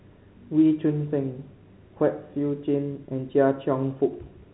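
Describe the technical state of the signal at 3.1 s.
Packet loss with pitch repetition at 3.06–3.08 s: about 20 ms of audio went missing, and the receiver filled it by repeating the last pitch period, giving a briefly held, buzzy sound.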